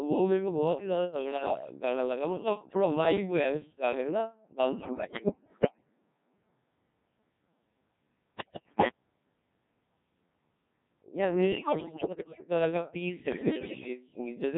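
The whole clip runs through a Codec 2 vocoder, likely its 1.3 kbit/s mode, rebuilding speech from pitch, voicing, energy and envelope alone, so it's heavily buzzy and robotic. Bit errors on digital voice radio then scramble frames at 1.37–1.66, 4.80–5.85, 8.36–8.92, 11.52–12.45 and 13.32–13.88 s, with corrupted parameters throwing pitch and level into warbling bleeps.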